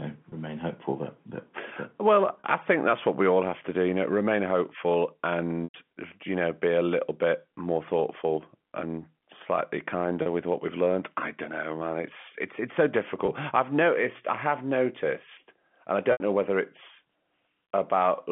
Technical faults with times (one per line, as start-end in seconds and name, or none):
0.30-0.32 packet loss with pitch repetition
2.41-2.44 packet loss with pitch repetition
5.64-5.74 packet loss with pitch repetition
10.22-10.26 packet loss with pitch repetition
13.26-13.28 packet loss with pitch repetition
16.12-16.20 packet loss with pitch repetition